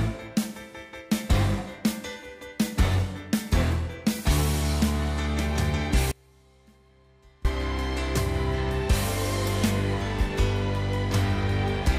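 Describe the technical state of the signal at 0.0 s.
At 0.0 s the signal is intact, with no audible dropout, distortion, clipping or other fault at that point.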